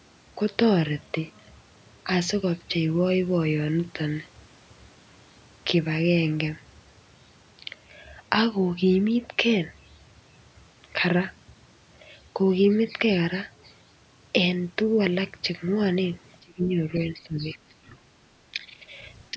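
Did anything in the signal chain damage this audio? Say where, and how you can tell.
Yes. Speech suppressed in double talk, likely at the call's echo canceller, dips the speech by about 25 dB at 16.4–16.78 s, then about 15 dB at 16.97–18.09, 18.29–18.94 and from 19.31 s. The level is ducked, not dropped to digital silence like packet loss.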